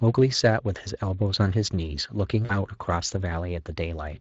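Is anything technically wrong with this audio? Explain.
Yes, there's VoIP packet loss concealed by the speech codec at 2.45 to 2.52 s. About 40 ms went missing, which fits two lost frames. The decoder stretched the last pitch into a brief buzzy or noisy smear, fading before recovering.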